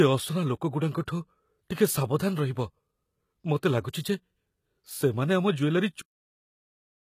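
Throughout the speech, treble above the crossover sounds gritty and lispy, and everything above 14.9 kHz is gone; a spectrogram shows smeared, copied-looking upper bands, likely HE-AAC compression at a bitrate around 20 kbps. At 6.01 s comes a cut-off end: the final buffers never played, so the waveform drops mid-sound to flat digital silence without any decay.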